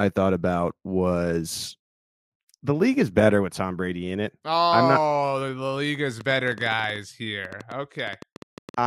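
A speech clip with a train of clicks from 6.21 s to 8.80 s, right after "league is". About 30 similar pops arrive unevenly, roughly 9.3 per second, peaking around 5 dB above the speech. Interference from nearby equipment is the likely source.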